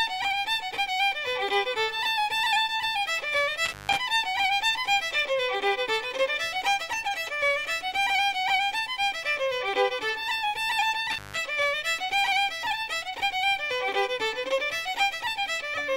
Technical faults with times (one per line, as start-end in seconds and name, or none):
3.65-3.97 intermittent contact
11.11-11.39 intermittent contact